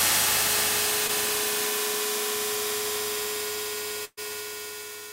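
Short concealed packet loss at 1.07 to 1.11 s: about 20 ms of audio arrived too late to be decoded. The receiver covered roughly 13 ms by extending the preceding sound, then blended back in, leaving a brief smear or wobble.

Burst of packet loss at 4.05 to 4.19 s: about 120 ms of consecutive audio was lost. The receiver kept synthesising the last sound for about 124 ms while fading it, producing a held buzz or hiss that dies into about 40 ms of silence before the audio resumes further on.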